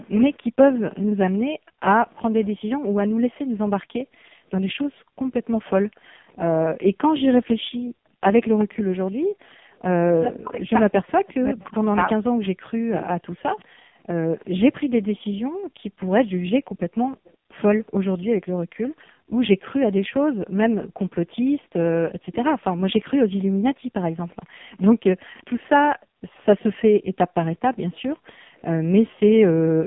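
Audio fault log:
Throughout: AMR narrowband mobile codec. The line runs from 150 Hz to 3.5 kHz at about 5.15 kbps, and the damage is heavy. The sound turns buzzy and synthetic, with nothing above 3.6 kHz. A spectrogram shows a hard ceiling near 3.6 kHz and smeared, pulse-like harmonics in every 20 ms frame.
0.12–2.48 s and 8.58–26.63 s: echo leak. A copy of the sound returns 375 ms late. It sits at about 10 dB below the direct sound in the first stretch and about 25 dB below in the second. Its likely cause is a far-end loudspeaker echo the canceller missed. The waveform shows a weaker delayed envelope trailing the speech.
0.99–9.74 s and 13.88–29.2 s: background gated by the echo canceller. The room sound dips by up to about 40 dB while the loudspeaker plays, around 4 s in total in the first range and 7 s in the second. On a spectrogram the noise floor turns into dark, hard-edged gaps, and the waveform shows flat stretches in between.
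10.05–13.6 s: speech suppressed in double talk. With both sides talking at once, the near talker drops by up to about 40 dB, in pieces adding up to around 3 s. The likely cause is the canceller attenuating everything when it cannot separate the talker from the echo. The waveform shows chopped, collapsed envelopes.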